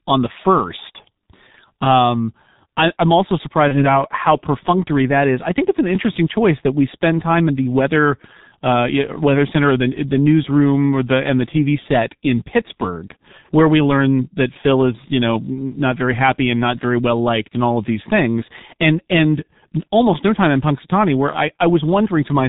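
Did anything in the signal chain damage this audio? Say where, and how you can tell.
Yes. The codec stage is the main culprit: the whole clip carries G.723.1 codec damage, and it is heavy. Nothing comes through above 4 kHz, vowels sound hoarse and muffled, and consonants smear together, which fits the 6.3 kbit/s mode. A simple low-pass filter would dull the top end but keep consonant timing crisp. Here the slowly updated vocal-tract model blurs transitions across its 30 ms frames, and that points to a low-rate speech coder.

At the network stage there is VoIP packet loss concealed by the speech codec, from 3.68 to 3.86 s. The speech is briefly stretched into a fading sound rather than dropping to silence or clicking, which fits a single lost 30 ms frame. The decoder rebuilt the gap from its last pitch and filter state with falling gain. Because each frame depends on the previous one, the sound stays weak or distorted for tens of milliseconds after packets resume.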